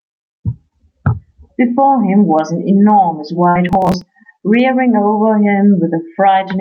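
Throughout the speech, the gain drops by around 10 dB the moment the talker gets loud, leaving loud and quiet passages squeezed close together. This is gain pumping, likely from input gain set far too high with a fast limiter clamping each peak. Unlike a noise gate, which silences the gaps, this raises the noise floor in the gaps and rides it up and down with the speech.

From 3.49 to 3.58 s comes a burst of packet loss. The receiver stretched the last received sound for about 57 ms, fading it as a held buzz or hiss, and then resumed with roughly 60 ms of the speech simply gone. It differs from a dropout to silence because the gap is filled with a smeared, decaying copy of what came just before, and the speech jumps ahead.

Shortly after, from 3.69 to 4.01 s, processor overload crackle tears across the sound. Around ten short audio buffers, each near 10 ms, pointing to buffers of that size, missed their deadlines and were skipped. 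Each skip leaves a tiny hard-edged gap, and together they make a gritty rasp that stops once the load eases. Unlike the packet loss, nothing is held or faded over the gaps. The speech is chopped into many small pieces instead of losing one stretch. Through all of this the call codec limits the top end to about 8 kHz.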